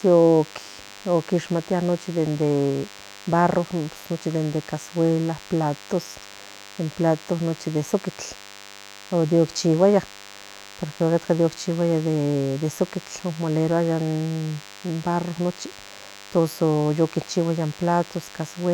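The speech carries DECT cordless phone buzz from start to finish: a thin, steady buzz at 100 Hz, rich in harmonics, sitting roughly 20 dB below the speech. A DECT handset or base station close to the recording chain transmits a short radio burst every 10 ms, and some stage of the audio circuitry rectifies that RF. This turns the burst pattern into an audible 100 Hz pulse train that rides under the speech.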